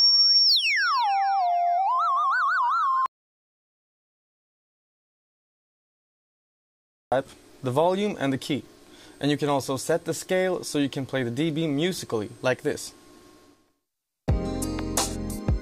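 At 3.06 s the audio drops out to silence until 7.12 s, losing about 4.06 s; the input was likely cut off while zeros kept being written. The waveform goes flat and the spectrogram turns fully black, with no room tone.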